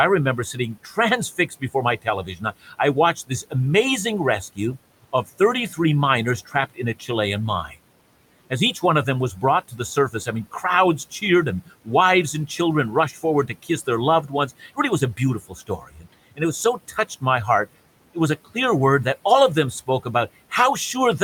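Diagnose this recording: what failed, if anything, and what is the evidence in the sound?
Call processing failed: speech cut by the noise suppressor. Quiet parts of the speech sink into the room noise, which sits about 21 dB below the talker. This happens at 0.53–3.54 s, 4.55–5.78 s and 6.45–7.1 s. It happens again at 9.36–11.89 s after "one of them was", and at 13.12–18.56 s before "word that all of". The cuts reach about 15 to 18 dB. The suppressor mistook soft speech for noise and turned it down with the background.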